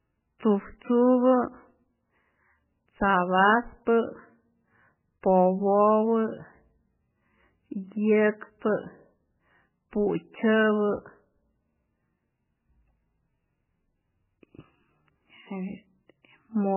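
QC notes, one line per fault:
Throughout, MP3 compression: nothing above 3 kHz plus heavy watery swirl, likely a very low bitrate near 8 kbps, unlike a plain low-pass filter, which wouldn't swirl.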